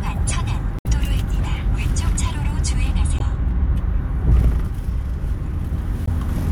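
Damaged data in the compressed stream makes the decoder misread frames and lose sync while hunting for the next frame header. In this everyday-sound recording, that produces brief chirps or blips at 0.77 to 0.87 s, 3.17 to 3.21 s, and 6.05 to 6.09 s.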